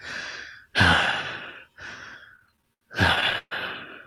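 From about 2.29 to 3.53 s the audio hits repeated stalls (stutter): fourteen brief holds where packets arrived late, the jitter buffer drained, and the receiver stretched the last sound, up to 129 ms at once. Nothing's lost, but it drags and stutters.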